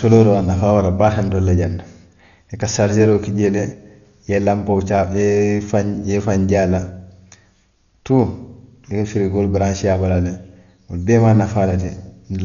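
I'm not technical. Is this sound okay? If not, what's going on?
No. The speech sounds dull and muffled throughout, with rough, fluttery noise, likely from heavy Dolby Digital compression discarding everything above 6.9 kHz.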